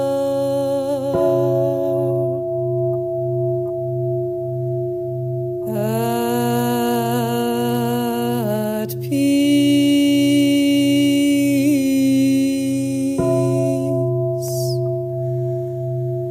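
Power-line current is leaking into the signal path, most plausibly through a ground loop or a transformer sitting close to the wiring, and the result is mains hum running from start to finish. It sits at 50 Hz as a steady low drone, roughly 25 dB below the wanted audio, so it runs under everything and is most exposed in the quieter moments, where nothing masks its constant, unwavering pitch.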